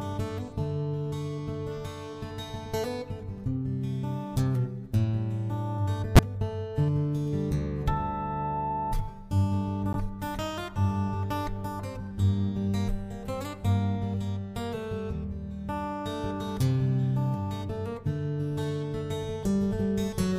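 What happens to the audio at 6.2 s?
A corrupt frame is decoded from 6.15 to 6.19 s. Damaged bits in a couple of compressed frames put energy at wrong frequencies, causing a brief, fairly loud chirp, squeak, blip or burst of noise.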